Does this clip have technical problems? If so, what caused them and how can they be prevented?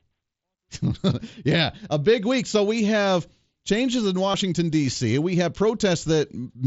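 Yes. From 4.32 to 4.34 s there is concealed Bluetooth headset packet loss. A gap of about 22.5 ms, consistent with three consecutive lost frames, was filled by the receiver repeating the closest-matching piece of the preceding waveform. This produces a brief buzzy sustain at full level and a slight warble as real audio resumes. The link runs through the mSBC wideband headset codec. Keeping the headset close to the phone with a clear line of sight, and away from crowded 2.4 GHz traffic, prevents these dropouts.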